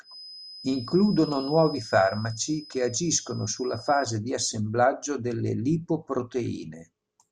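From the start to 4.2 s, a thin feedback whistle at 5 kHz sits about 20 dB under the speech, swelling and fading slowly, likely a speaker-to-mic loop hovering at the edge of howling.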